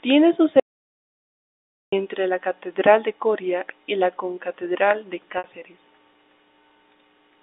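At 0.60 s the input signal stops reaching the recorder, most likely because a device disconnected or a mute was briefly engaged, and silence is written in its place until 1.92 s. The result is an audio dropout to silence lasting about 1.33 s. The speech breaks off mid-flow into dead digital silence with no room tone beneath it, and then resumes abruptly. Whatever was said during that stretch is lost.

At 5.38 s the stream loses about 60 ms of data, which fits three 20 ms packets going missing on the line. The receiver covers the hole by packet loss with pitch repetition: it loops the last pitch cycle it received and fades it down. Until 5.44 s the voice turns into a short held, buzzy tone that dies away, and the speech then cross-fades back in. The narrow telephone band of the G.711 coding, roughly 250 Hz to 3.7 kHz, can be heard throughout.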